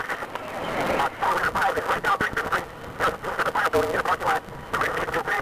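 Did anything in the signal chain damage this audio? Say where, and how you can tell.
Yes. A block size mismatch (truncated) at the driver or buffer stage runs throughout: a steady 172 Hz buzz, with the sound racing 1.88 times fast at normal pitch. Block tails are dropped, which fits a 256-sample read.

A train of clicks sits from 2.08 to 2.60 s. About five evenly spaced pops, 4.18 per second, stand well above the sound. Interference in the analogue wiring is the likely cause.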